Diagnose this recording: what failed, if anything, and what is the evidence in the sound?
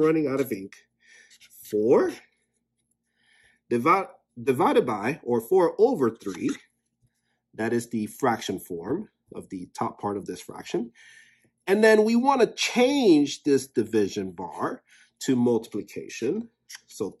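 Nothing failed: no stage from wiring and conversion through to storage and playback leaves any audible evidence of a fault anywhere in the recording.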